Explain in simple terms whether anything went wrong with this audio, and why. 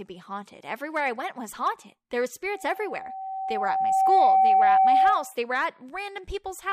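Something did go wrong: there's a loudspeaker feedback squeal from 2.54 to 5.34 s. The mic is catching its own speaker, so a 768 Hz tone feeds on itself, swells over about a second and a half, and ends up much louder than the speech.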